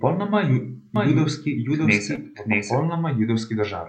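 Speech, and from about 0.96 s to 2.81 s there's a doubled audio track: a second full-band copy trails the original by roughly 0.7 s at around 5 dB down, dry with no room colour, and it cuts in and out abruptly. That's likely a slower second capture path or an edit leaving two misaligned copies. Inside that stretch, at 2.15 to 2.19 s, there's a short concealed packet loss: about 20 ms never reached the decoder, and roughly 16 ms was filled by extending the preceding sound, which leaves a brief smear before it blends back in.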